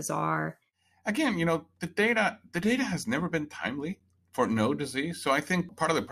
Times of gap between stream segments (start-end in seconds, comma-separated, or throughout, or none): 4.00